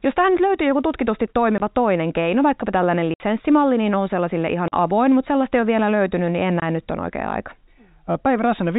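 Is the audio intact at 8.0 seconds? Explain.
Yes, the audio is intact at 8.0 seconds: there is no dropout, click or other fault at that moment, only the steady telephone-band sound of G.711 coding with nothing passing above 4 kHz.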